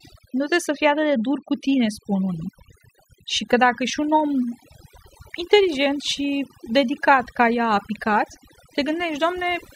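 From start to finish the speech suffers from overdone noise removal. Someone pushed the noise reduction way too hard on a noisy take, so any frequency band sitting close to the tool's guess at the noise gets pulled right down or switched off, and the softer parts of the voice get caught too. You hear it as a near-dead background full of little twinkling specks.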